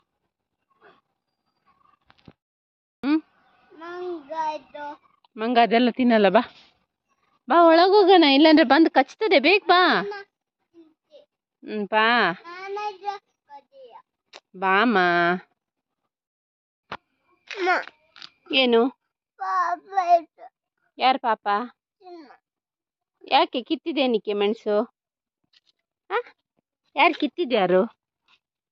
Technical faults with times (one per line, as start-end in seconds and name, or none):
5.65-6.86 drift correction step
27.51-28.72 drift correction step